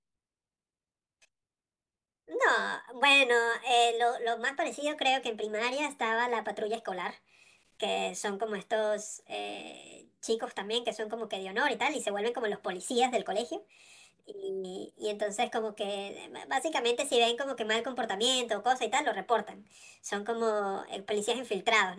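From start to finish, a wrong sample rate plays the speech 1.38 times too fast and about 5.5 semitones high, consistent with 16 kHz material played at 22 kHz.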